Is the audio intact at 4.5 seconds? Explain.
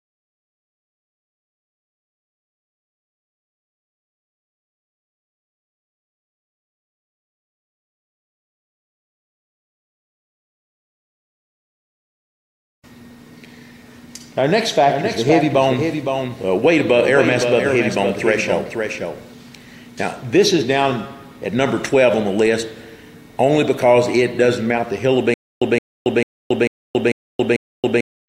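Yes, the audio at 4.5 seconds is intact, with no dropout, click, distortion or other fault at that moment.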